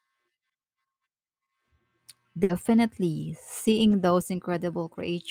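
At 2.43 s the speech hits a burst of packet loss lasting until about 2.51 s. Several consecutive packets never arrived in time, so the receiver stretched the last sound it had for about 60 ms, letting it fade, then resumed with about 60 ms of speech skipped. Unlike a plain dropout, the gap is not silent but filled by that last sound held and fading, and the speech afterwards jumps ahead rather than continuing smoothly.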